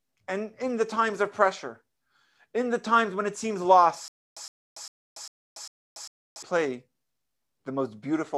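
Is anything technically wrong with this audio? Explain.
Yes. From 4.08 to 6.43 s, just after "times when it seems", the speech falls into a stutter with silent gaps. A 114 ms fragment repeats six times, each followed by about 285 ms of digital silence, so bursts return every 399 ms. The likely cause is a stalled stream or player replaying its last buffer on each retry, and the speech that belonged in that span is lost. A waveform shows identical blocks separated by flat silent stretches, and a spectrogram shows repeated vertical stripes with blank gaps between them.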